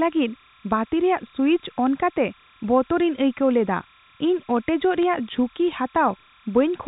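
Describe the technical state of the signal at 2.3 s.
At 2.3 s, timecode bleed sits behind the speech, as it does through the whole clip. Linear timecode from a nearby track or cable has leaked into the audio path. Its square wave flips between two pitches near 1 kHz and 2 kHz, heard as a steady chirping warble about 35 dB below the speech. The rhythm fits 30-frame code. Its two pitches sit inside the telephone band.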